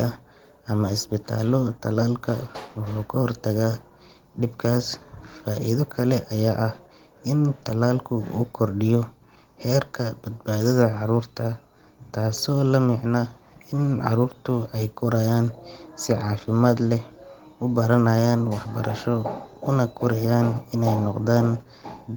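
No technical faults can be heard anywhere in the speech. The Opus voice compression keeps the full audio band, with the upper range above 8 kHz carried by a separate layer on top of the speech coder, and it leaves only a light coding texture, which fits a hybrid stream at around 20 kbps.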